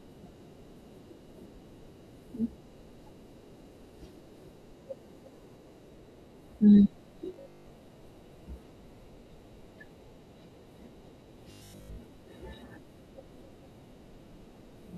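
Robotic sound from repeated short buffers appears from 7.34 to 7.70 s and again from 11.52 to 11.98 s. Each stretch turns the speech into a rigid metallic buzz at 50 Hz. The likely cause is audio arriving too seldom, so a roughly 20 ms buffer is replayed for most of each stretch while the real audio is skipped.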